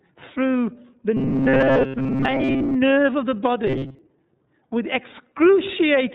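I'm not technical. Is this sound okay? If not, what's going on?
No. Robotic sound from repeated short buffers appears from 1.17 to 2.76 s, right after "through the" and ending just before "nerve of the", and again from 3.67 to 3.99 s, just after "nerve of the". The likely cause is new audio arriving too slowly, so the software keeps replaying a tiny scrap for most of that stretch. This turns the speech into a stiff, metallic buzz at 133 Hz.

Throughout, the iLBC codec, a phone-call format, cuts off everything above 4 kHz and rebuilds the speech in separate 30 ms slices, so the voice sounds muffled, slightly rough and a bit synthetic.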